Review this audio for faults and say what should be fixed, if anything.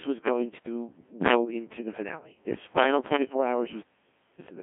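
Codec 2 vocoder damage runs throughout the speech. Only pitch, voicing, energy and a spectral envelope survive, so sine-wave resynthesis makes it heavily robotic and buzzy, confined to 150 Hz to 3.4 kHz with nothing above 3.7 kHz, which fits roughly 1.6 kbit/s. Record before the Codec 2 link, or use a higher-bitrate waveform codec.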